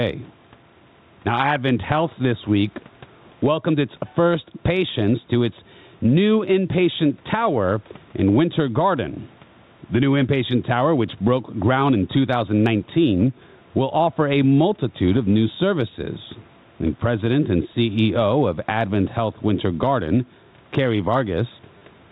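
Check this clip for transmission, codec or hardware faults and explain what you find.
Two faults are audible in the speech: gain pumping across the whole clip, and a brief packet-loss repeat near the very end.

Gain pumping runs from start to finish. The input gain is likely set far too high for the microphone, so a fast limiter or compressor clamps down on each loud sound and then lets go. The level swings by around 10 dB as it does this. Soft and loud passages end up pressed closer together, and the speech sounds squashed and breathing in level.

Packet loss with the last packet repeated occurs at 21.78 to 21.81 s. About 30 ms of audio never arrived, which fits three lost 10 ms packets. The receiver filled the gap by replaying the last good packet until fresh data came. Because the same short slice loops, it buzzes at the packet rate, about 100 Hz here. The result is a short robotic stutter just before the clip ends. 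The room noise beneath the speech sits about 42 dB down, and the telephone band of the G.711 coding is audible as a narrow, phone-like tone.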